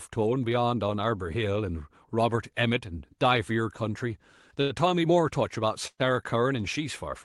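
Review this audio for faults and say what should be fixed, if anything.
A short stall from a late packet at 4.61 to 4.72 s holds the sound for about 86 ms while the jitter buffer is empty, then resumes with nothing lost.

A call audio freeze at 5.87 to 6.01 s stretches the sound into a fading buzz for about 123 ms, including 60 ms of silence. The likely cause is packets held up in transit.

Fix both by giving the jitter buffer more headroom or adaptive depth, and by reducing network delay variation on the call path.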